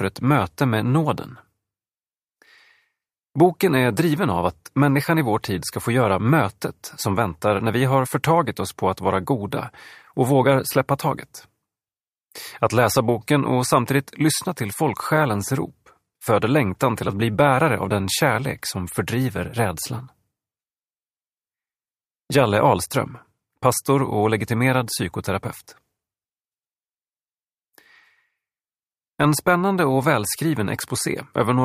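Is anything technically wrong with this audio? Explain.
No, nothing technically wrong stood out on listening to this audio.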